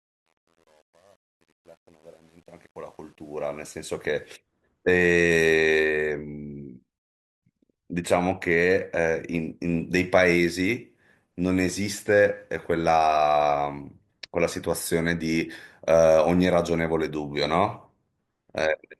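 Speech, with two technical faults. The opening carries truncation distortion on a fade. The fade-in runs from the very start to 4.34 s, and its quiet early part sounds gritty. From 0.0 to 3.37 s it is worst. The digital gain stage kept too few bits and added no dither. Low levels collapse into coarse square steps, which fits roughly 9-bit resolution. The grit clears by 4.34 s, as full level arrives. Later comes a rebuffering stall. At 6.98 s the sound cuts to silence. It resumes at 7.42 s exactly where it stopped. The player ran short of downloaded audio and waited for more. Nothing is skipped, but 440 ms of dead air is added.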